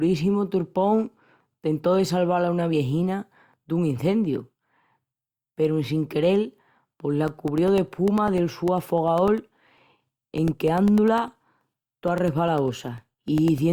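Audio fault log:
7.28–13.58 s, periodic USB or driver dropouts: about a millisecond of speech replaced by silence every 0.1 s, giving even ticks heard only while sound plays, unlike random dropouts.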